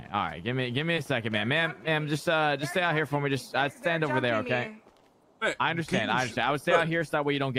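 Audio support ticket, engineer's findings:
Listened through in full with nothing standing out, so no findings to log against this clip.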